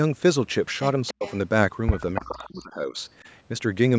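From 1.07 to 1.37 s a faint delayed copy of the speech trails the talker by 289 ms, sitting well below it. This is an echo leak: a loudspeaker's sound likely reached the far-end microphone and slipped past its echo canceller. Within that stretch, from 1.12 to 1.26 s, the speech sinks sharply, by roughly 40 dB at its deepest, for about 150 ms. That is speech suppressed in double talk, likely caused by the canceller clamping down on both voices while they overlap. The echo returns louder from 2.15 to 2.46 s, now only about 10 dB under the speech, again 289 ms late. From 2.21 to 2.98 s the speech dips by up to roughly 30 dB for about 0.7 s as the same suppression strikes again.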